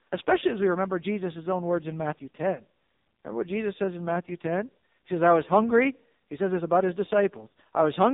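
AMR narrowband mobile codec damage runs through the whole recording. Everything above 4 kHz is gone, and the speech has a heavy buzzy, synthetic quality, as a vocal-tract model driven by very few pulses per frame rebuilds it. This fits AMR-NB's low 5.9 kbps mode.

Lost AMR speech frames occur at 7.48 s, just after "says this about his". The decoder stretched the previous pitch and vocal-tract settings at falling gain, producing a brief dip and warble before the voice returns weak or rough for a moment. This fits two dropped 20 ms frames.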